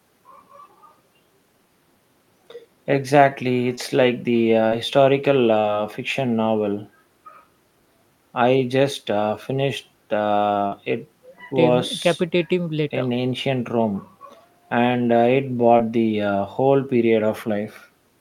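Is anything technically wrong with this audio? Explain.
Yes. The speech has two kinds of network fault.

Short concealed packet loss occurs at 3.75, 4.69, 10.68 and 15.77 s. Each time, 20 to 40 ms of the stream arrived too late, and the receiver filled it by extending the preceding sound before blending back in. It is heard as a brief smear or wobble.

A burst of packet loss runs from 5.59 to 5.66 s. About 40 ms of audio is lost, and 46 ms of synthesized continuation replaces it while fading down, giving a short held buzz or hiss before the speech resumes with that stretch missing.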